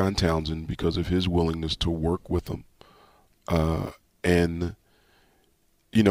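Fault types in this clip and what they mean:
No technical faults are audible.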